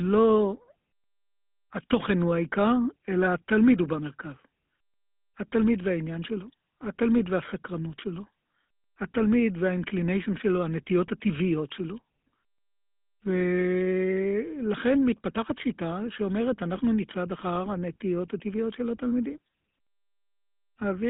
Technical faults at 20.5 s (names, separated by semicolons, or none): GSM full-rate codec